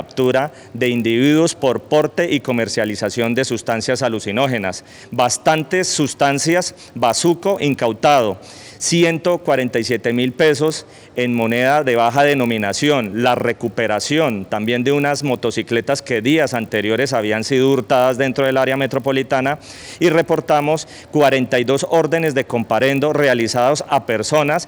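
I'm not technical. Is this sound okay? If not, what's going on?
No. From start to finish there's a buzz at about 50 per second, from a resampler restarted on every 20 ms block. Unlike mains hum, it disappears whenever the sound goes quiet.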